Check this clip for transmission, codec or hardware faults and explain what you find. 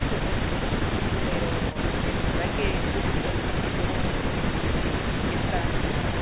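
Nothing here points to a transmission, codec or hardware fault; the speech just has the narrow, phone-like sound of a G.711 call, with nothing above 4 kHz, which is exactly what that codec does.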